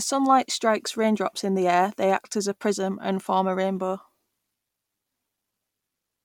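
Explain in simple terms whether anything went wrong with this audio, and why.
Nothing went wrong; no faults can be heard here.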